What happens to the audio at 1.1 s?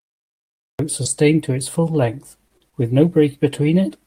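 From 1.05 to 1.07 s, a lost packet was rebuilt from error correction. The packet that followed carried a low-bitrate copy of the missing 20 ms, and the decoder played it, so there is no gap, only a brief rougher, noisier patch in the speech.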